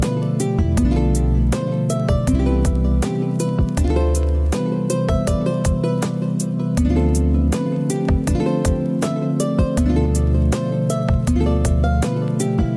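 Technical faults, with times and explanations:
No technical faults are audible.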